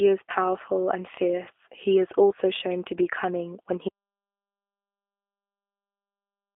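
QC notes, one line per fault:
Throughout: G.729 codec. The speech has that clearly audible rough, slightly synthetic edge of a low-rate VoIP coder at 8 kbit/s. It's being rebuilt from a vocal tract model and a few pulses per frame, and the band is squeezed to roughly 300 Hz to 3.5 kHz, so everything sounds thin and telephone-like.
3.89 s to the end: audio dropout to silence. The sound cuts off mid-flow and never returns, leaving dead silence with no room tone at all. That points to the input signal being lost, likely a disconnect or stray mute, while recording carried on writing silence.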